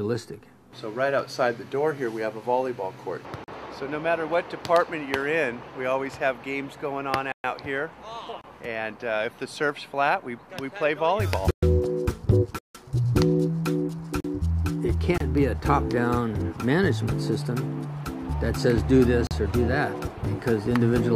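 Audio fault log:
3.44 s to 19.31 s, block of digital silence: the sound drops out eight times, at 3.44 to 3.48 s (40 ms), 7.32 to 7.44 s (120 ms), 8.41 to 8.44 s (27 ms), 11.51 to 11.63 s (120 ms), 12.59 to 12.75 s (160 ms), 14.20 to 14.24 s (40 ms), 15.18 to 15.20 s (26 ms) and 19.27 to 19.31 s (40 ms). Each gap is a stretch of zeros played in place of the audio. The sound stops and resumes with no fade, so every gap is heard as a short hole.
20.16 s, compressed frames skipped: about one frame of compressed audio, with frames 23.2 ms long, is not played. It was either missing from the file or rejected by the decoder as damaged. The audio jumps ahead by about 20 ms. A lossy codec's overlapping frames would make this join a brief smeared blip. Lossless frames would meet with a hard click.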